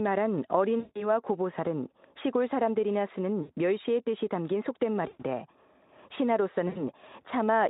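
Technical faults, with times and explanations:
0.79–1.03 s, 3.41–3.51 s, 5.07–5.23 s, 6.67–6.83 s: VoIP packet loss concealed by the speech codec. Buzzy, smeared, fading tone as the Speex decoder extrapolates across 160, 80, 120 and 80 ms gaps, then recovers weakly.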